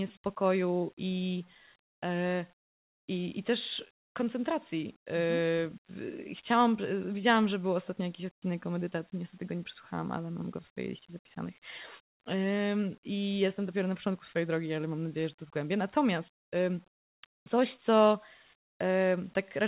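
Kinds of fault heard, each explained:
Comfort noise in place of the background: from 17.36 to 17.46 s, a 100 ms gap where the quiet background, about 57 dB below the loudest parts, becomes a steady, featureless hiss about 22 dB quieter. The likely cause is the sender pausing transmission while the receiver fills in synthetic noise. On a spectrogram the textured floor turns smooth and even beneath the 4 kHz ceiling of the call codec; the waveform flattens to a near-silent trace.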